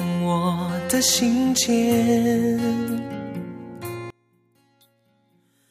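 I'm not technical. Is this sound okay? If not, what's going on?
No. From 4.10 s to the end, the sound almost disappears, most likely from one channel inverted, so the matching left and right parts cancel when they are combined.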